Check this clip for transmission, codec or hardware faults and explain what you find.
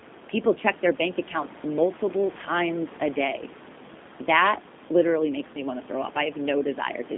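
One codec fault runs through the whole speech clip. The room noise, about 16 dB below the speech, is part of the recording.

G.729 codec damage is plainly audible throughout. The sound is confined to roughly 200 Hz to 3.6 kHz. It is rebuilt from a vocal tract filter, pitch prediction and sparse pulses. It sounds rough and slightly synthetic, and the background noise warbles. This fits the 8 kbit/s G.729A coder.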